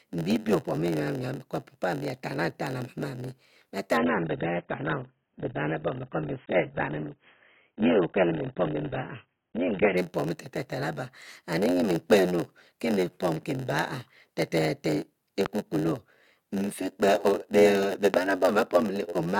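A steady buzz at 91.9 Hz runs under the whole recording, and the speech drags at 0.919 times normal speed: a block size mismatch (padded), where zero-filled gaps pad each short block.

From 3.97 to 9.97 s the speech turns dull and smeared, with nothing above 3.8 kHz. This is an adaptive stream at a lower bitrate, consistent with a switch from a mid-rate to a very low-rate AAC-LC version.

Two loud pops follow, at 15.46 to 15.48 s (roughly 15 dB above the speech) and 18.14 to 18.16 s (roughly 20 dB). Each is a single sharp crack over the ongoing speech, likely from an electrical voltage spike.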